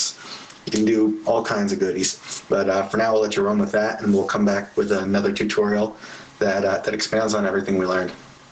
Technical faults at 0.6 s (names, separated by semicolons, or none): gain pumping